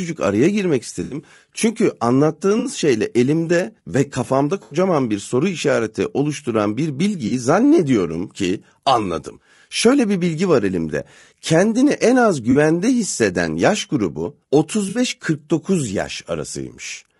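The whole clip has a rough, grainy quality, with noise sitting between the voice's harmonics and a thin, synthetic-sounding top end. That's likely low-delay AAC compression (AAC-ELD), and the damage fits a bitrate around 32 kbps.

On top of that there are six dropouts from AAC frame loss with concealment, at 1.03–1.17, 2.59–2.69, 4.63–4.77, 7.27–7.32, 12.51–12.57 and 14.89–14.99 s. Each lasts 40 to 80 ms. The decoder patches the gap from the last good spectrum, so each one comes out as a short smeared, noisy or phasey blip.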